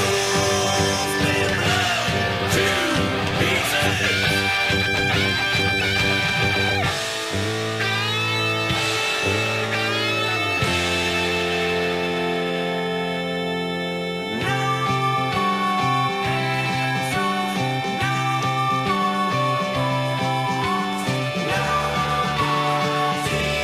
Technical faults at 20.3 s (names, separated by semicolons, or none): switching supply whistle